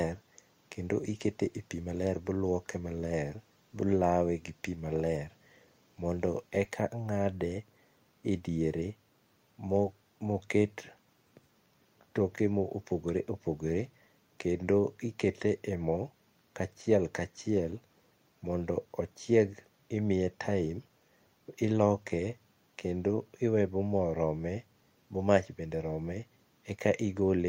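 No technical faults are audible anywhere in the speech recording.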